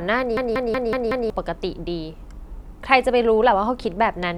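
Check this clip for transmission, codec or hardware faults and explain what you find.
One hardware fault is present. From 0.37 to 1.30 s, a system hang loop repeats one 186 ms fragment five times at 5.4 Hz. This fits an 8192-sample ring buffer replaying while the system froze. It sounds like a machine-gun stutter, and about a second of speech is lost.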